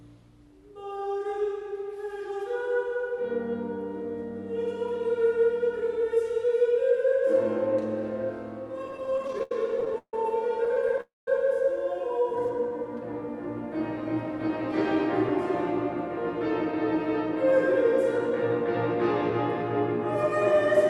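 Repeated stalls (stutter) run from 8.87 to 11.00 s. Packets kept arriving late, so the jitter buffer emptied 25 times in that stretch. Each time, the receiver stretched the last sound to fill the wait. Those patches add up to 464 ms, about 22% of the span, and the longest single hold is 148 ms. Nothing is lost, but the audio catches and drags in a halting, stuttering rhythm.

A call audio freeze follows at once, from 11.01 to 11.28 s. The sound holds as a fading continuation and then drops to silence for 180 ms, 264 ms of filler in all. The likely cause is packets held up in transit, which drained the buffer completely. When they arrive, playback resumes where it stopped. The added gap pushes the rest of the audio 264 ms later without removing any of it.

A jitter buffer slow-down occurs from 12.18 to 12.70 s. The buffer was short of reserve, so the receiver repeated single pitch periods or slivers of pause to rebuild it. 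That adds 54 ms and plays this half-second at 91% speed. The pitch stays the same, but sounds are drawn out and a faint warble can creep in.

Jitter buffer speed-up appears twice: from 14.72 to 18.31 s at 103% speed, and from 20.24 to 20.86 s at 105%. The buffer held more audio than its target, so the receiver trimmed short pieces of a pitch period or a few. The first stretch loses about a tenth of a second and the second a few tens of milliseconds. The pitch is unchanged, but the pace in the final, faster stretch sounds hurried. Throughout, the Opus call path's coding leaves nothing above 12 kHz.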